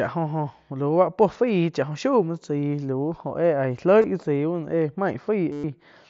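Concealed Bluetooth headset packet loss at 4.02–4.04 s drops three frames, about 22.5 ms. The longer loss at 5.52–5.64 s becomes a 120 ms buzzy repeated tone that warbles as real speech resumes.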